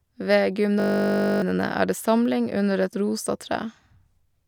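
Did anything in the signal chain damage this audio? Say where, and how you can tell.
Yes. The damage happens at the driver or buffer stage, as a system hang loop. From 0.8 to 1.42 s the speech stops and becomes a steady buzz. The buzz is a single 20 ms slice of audio repeating exactly, about 31 times, at a 50 Hz rate. That fits a stalled driver while the hardware keeps replaying the same short ring buffer. Roughly 0.7 s of real speech is missing.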